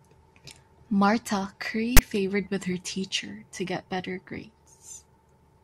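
At 1.97 to 1.99 s, file tags are played as audio: a 20 ms block of text metadata is read as samples, giving a loud, hard-edged rasp. The waveform jumps to a dense block offset to one side; the spectrogram shows a sharp broadband stripe.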